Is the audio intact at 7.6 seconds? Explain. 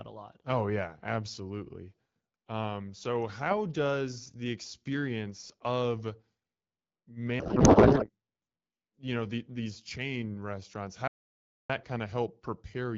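No. From 7.39 to 8.10 s a codec payload misread scrambles the AMR-WB frame fields, which fits octet-aligned packing read as bandwidth-efficient, so the speech turns to garbled noise and warble.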